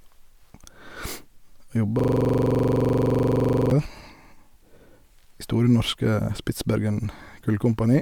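At 1.99 s the speech locks up into a system hang loop that runs until 3.71 s. The machine or its driver froze while the audio hardware kept replaying the same ring buffer, so a 42.67 ms slice repeats around 40 times, which fits a 2048-sample buffer. At that length the repeats come 23.4 times a second, so you get a rattly, machine-gun stutter rather than a smooth tone.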